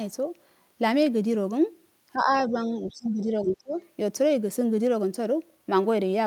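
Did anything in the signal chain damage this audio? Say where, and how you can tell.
Yes, in the call processing. The speech ducks twice: a light dip of around 5 dB from 2.13 to 2.31 s, then a much heavier cut, close to 20 dB at its worst, from 2.48 to 3.75 s. That pattern is likely speech suppressed in double talk. With both ends talking, the echo canceller couldn't tell this talker apart from loudspeaker echo, so its suppressor pulled the level down on both.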